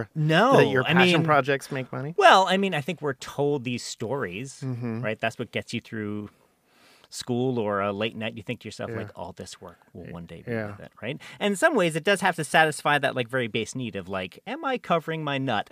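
Nothing goes wrong anywhere in this speech recording; there's simply no technical fault to point to.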